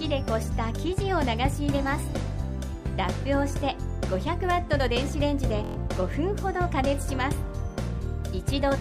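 At 5.64 s a Bluetooth stutter lasting about 0.13 s: packets arrived late or not at all, so the receiver looped its last short buffer, producing a rapid machine-gun buzz. Playback then resumes about 116 ms further on, skipping that stretch of audio.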